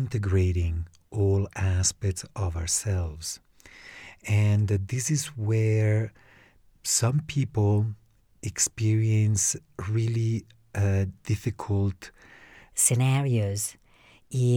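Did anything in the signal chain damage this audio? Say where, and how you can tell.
Yes. A section at the wrong speed runs from 12.72 s to the end at 14.56 s: the speech jumps to 1.21 times normal speed and sits about three semitones higher, hurried and thin. That points at the editing or playback stage, likely from resampling that section against the wrong clock.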